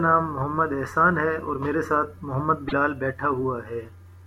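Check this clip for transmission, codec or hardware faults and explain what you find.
One codec fault is audible in this speech. At 2.68 to 2.73 s the audio jumps ahead and about 50 ms of sound is corrupted. This is likely a broken MP3 bit reservoir: after frames went missing, the next 24 ms frames read their borrowed data from the wrong bytes and decoded them as garbage.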